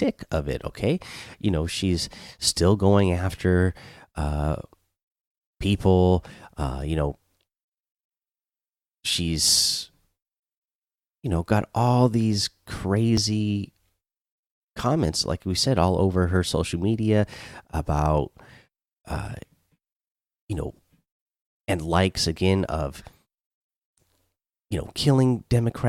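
At 13.17 s and again at 19.16 s the speech jumps with a tiny skip. That's an overlap between stream segments: neighbouring 6-second chunks claimed the same few milliseconds, so the player trimmed real audio away and the waveform skips across the gap.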